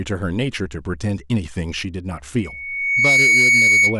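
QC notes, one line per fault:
2.39–3.99 s, loudspeaker feedback squeal: a steady 2.2 kHz tone rises out of the speech over roughly the first 0.7 s and holds at about 10 dB above it until the end, because the microphone is re-amplifying its own loudspeaker and the loop gain exceeds one there.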